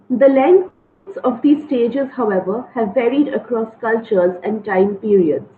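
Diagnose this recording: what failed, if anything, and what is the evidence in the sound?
From 0.67 to 1.08 s, a call audio freeze interrupts the speech. The last sound is held as a fading buzz or hiss for about 0.39 s. Then the speech resumes exactly where it stopped, with nothing lost, only delayed. Likely cause: network packets held up, emptying the jitter buffer.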